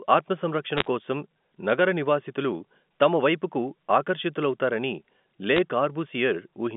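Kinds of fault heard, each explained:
Bit errors on a digital phone line: single flipped bits in the 8-bit telephone samples, each changing one sample. Here they come as short bursts of sharp ticks and crackle around 0.77–0.87 s and again around 5.53–5.58 s, riding over the narrowband speech.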